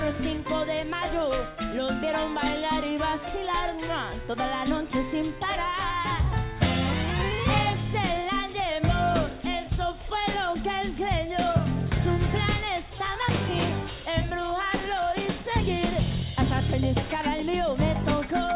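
Nothing here needs fixing: the audio has the narrowband character of a telephone-grade call path, with nothing above 4 kHz, which fits G.711 mu-law coding working as designed.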